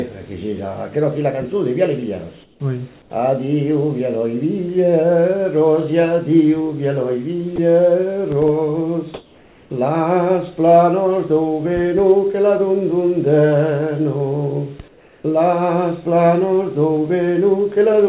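At 2.44 to 2.6 s, 3.02 to 3.1 s, 9.14 to 9.7 s and 14.88 to 15.24 s, the sender likely paused transmission during quiet stretches, and the receiver substituted comfort noise in place of the background. The real background, sitting about 31 to 34 dB below the loudest sound, turns into a flat, featureless hiss. It is about 6 dB quieter in the first gap, about 4 dB quieter in the second and fourth, and about 2 dB louder in the third.

At 7.56 s, the voice detector likely mistook a brief stretch of sound for background, so the sound was dropped by the voice detector. About 20 ms of it vanishes into the same steady noise.

Throughout, with nothing above 4 kHz, the band limit fits a G.711 A-law call path at 64 kbps.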